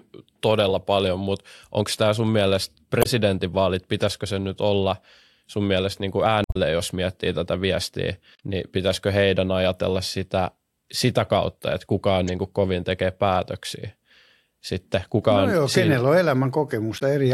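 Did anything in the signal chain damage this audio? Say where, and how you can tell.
Yes. Damaged data in a compressed stream, at the codec/storage stage, shows up as short chirps and blips at 2.99–3.06 s, 6.44–6.57 s (after "sun mielestä niin kuin"), 8.33–8.40 s, 12.28 s and 16.95–17.02 s. Corrupt bytes made the decoder misread frames, lose sync and hunt for the next header. On a spectrogram each appears as a narrow vertical smear of wrong energy; the waveform shows an abrupt discontinuity.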